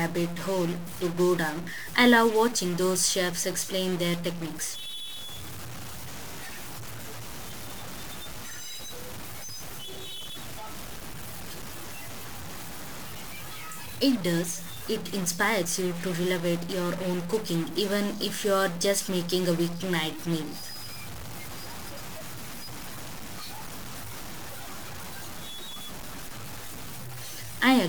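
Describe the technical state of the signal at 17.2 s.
At 17.2 s the speech carries a harsh, buzzy distortion from a stuck bit, present throughout the clip. One data bit is likely held fixed, shifting about half the samples by a step of around -35 dBFS. Pauses fill with steady noise.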